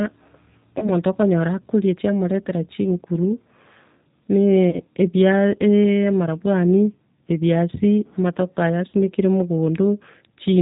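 Throughout the speech, G.729 coding leaves a rough, slightly synthetic timbre, consistent with an 8 kbit/s codec rebuilding the sound from a filter and sparse pulses. On a spectrogram, energy stops sharply at 4 kHz, and the harmonics look grainy and smeared.

At 0.79 to 0.90 s, just before "okonyora akoria chiamoretera chinguru", at 4.70 to 4.78 s, and at 8.90 to 8.94 s, right after "amanyabwari ebiasi amatoke aya", VoIP packet loss concealed by the speech codec occurs. Each gap fits about 30 ms of missing audio, likely a single lost packet. The decoder repeats its last pitch and filter at falling gain, so a brief buzzy tone or coloured noise that fades replaces the speech. On the waveform, the envelope decays smoothly.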